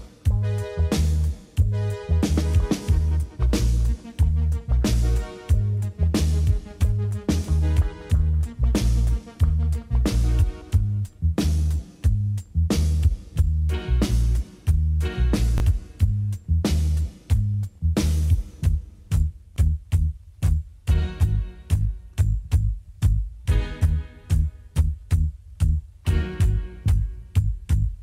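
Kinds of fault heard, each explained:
Chunks out of order: around 15.58 s, one short slice of audio, about 10 ms long, turns up one slot late, so it plays just after the piece that should have followed it. Nothing actually goes missing; the same material is all there, just swapped. Because the sample values don't line up at the three joins that swap creates, you get a tiny burst of jumbled texture right there, over in a couple of hundredths of a second.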